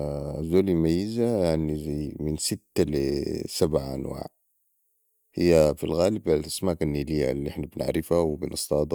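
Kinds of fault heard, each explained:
No audible technical faults in this speech recording.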